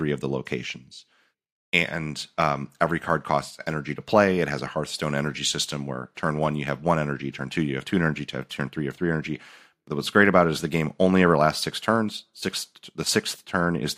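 No technical faults occur at any point in this speech recording.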